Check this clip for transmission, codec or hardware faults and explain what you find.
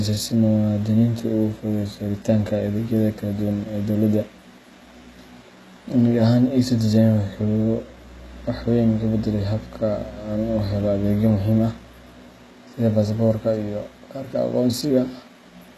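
There is one codec fault, and it runs through the whole clip. The speech has plainly audible HE-AAC compression damage, likely from a very low bitrate near 16 kbps. Treble is rebuilt from copied lower bands, so s sounds turn gritty and metallic, with nothing above 12.3 kHz.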